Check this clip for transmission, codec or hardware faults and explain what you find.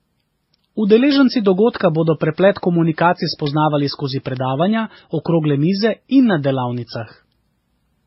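Yes, two kinds of fault are present.

Throughout, the artefacts of several codecs are heard together in the speech, with nothing above 5.6 kHz. This is likely transcoding between lossy codecs, a very low-rate MP3-like stage followed by HE-AAC and WMA-style coding. The spectrogram shows a hard ceiling with blotchy, stacked artefacts.

Bit error spikes occur at 1.11 s (just before "dogodka bodo preplet komunikacij"), at 3.47 s (just after it) and at 4.37 s. Each is a flipped bit that makes the sample value jump and return, heard as an isolated sharp tick. On the waveform each is a lone one- to three-sample needle, and on the spectrogram a thin full-band vertical line.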